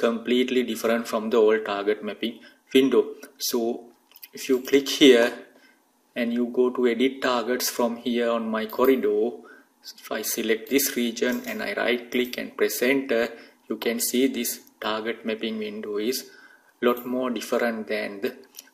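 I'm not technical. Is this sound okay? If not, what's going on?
Yes, nothing in this recording points to a technical problem with how the sound was captured or delivered.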